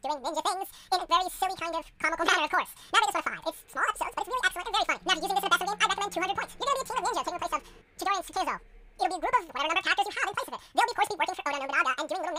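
The reader took two samples per frame throughout, as if stereo or wider samples, so the audio runs at double speed, an octave higher.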